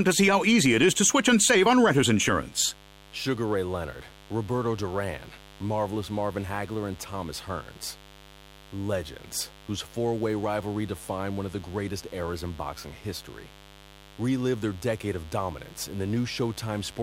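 A steady, raspy mains buzz runs under this speech from start to finish, sitting roughly 25 dB below it. It comes from switching spikes riding on the 50 Hz supply, with harmonics climbing into the kilohertz range.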